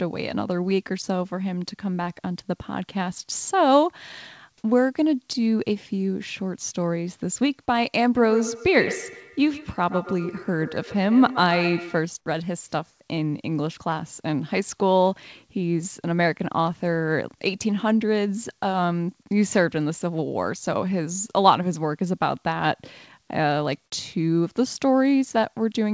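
From 8.17 to 12.07 s there is feedback echo between two devices. A second device in the room replays the call audio into the microphone, and neither echo canceller removes it. The sound returns at roughly 150 ms intervals, thinner and ringing, peaking about 10 dB below the speech.

At 12.90 to 13.00 s the room background is replaced for 100 ms by flat, featureless hiss about 6 dB quieter. This is likely comfort noise in place of the background, inserted during a discontinuous-transmission pause in the G.722-style band that stops at 8 kHz.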